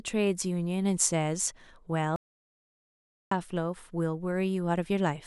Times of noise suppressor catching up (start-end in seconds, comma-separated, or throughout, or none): none